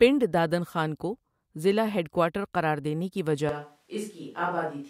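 At 3.49 s, just after "ہیڈ کوارٹر قراردینے کی", the sound turns abruptly roomy and hollow until the end, likely a switch to a distant microphone. The waveform drops about 5 dB; the spectrogram shows weaker lows, smeared reverberant tails and a faint, raised noise floor.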